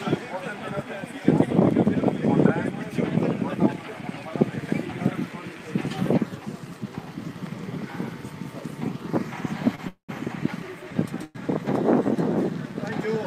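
At 9.75 s a short stall from a late packet holds the last sound about 28 ms with a slight buzz or dip, then resumes with nothing lost. A call audio freeze follows at 9.88 to 10.11 s and again at 11.24 to 11.37 s. The sound fades to silence for about 110 ms and then 10 ms before resuming, likely because packets were held up in transit. Unlike the stall, these freezes insert real gaps.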